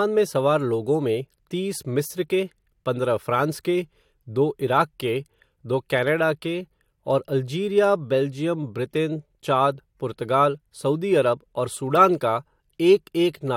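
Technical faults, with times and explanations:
No technical faults can be heard in this speech recording. There is nothing to time or explain.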